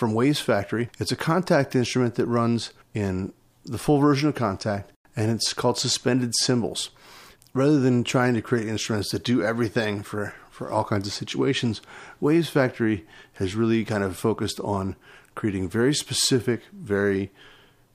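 No technical faults detected.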